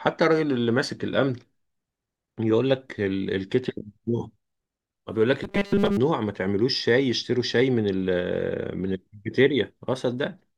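Speech clip, and from 5.44 to 5.97 s it goes to robotic sound from repeated short buffers: a rigid 200 Hz metallic buzz, likely from audio arriving too seldom, so a chunk of about 5 ms gets looped over most of that stretch.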